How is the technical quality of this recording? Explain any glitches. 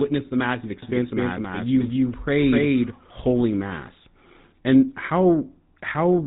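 Quality is pretty rough: the whole clip has that squeezed mobile-phone sound, and for a stretch near the start everything is heard twice.

The GSM full-rate codec damage runs the full length. It models the throat and mouth as a filter and feeds it a sparse train of regularly spaced pulses, keeping only a fraction of the detail. The result is plainly audible buzzy, gravelly roughness over the speech, and nothing comes through above 3.8 kHz, so it sounds dull and boxy. That all fits a 13 kbps GSM stream.

The doubled audio track runs from 0.82 s to 3.44 s. A second, full-band copy of the speech trails the original by about a third of a second, at roughly the same loudness. There's no reverb tail or room colour on it, and it cuts in and out abruptly at those two points, so it reads as a clean echo. The likely cause is the same audio being picked up again through a slower path, or an edit that left two copies out of step.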